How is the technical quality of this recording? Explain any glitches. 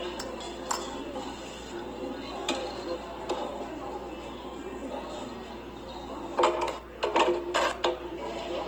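The technical quality is held back by plainly audible codec damage across the whole clip of sounds. From start to finish, tonal parts come out noisy, rough and grainy rather than clean. This is most likely Opus compression in its music (CELT) mode, and the degree of damage fits a low bitrate around 16 kbps. The encoder preserves each band's energy but runs short of bits for detail, so it fills bands with folded copies of lower content or with noise. On a spectrogram the bands stay filled, with few holes and content reaching about 20.4 kHz, but harmonics look smeared into a speckled, noisy texture. On the waveform nothing obvious shows.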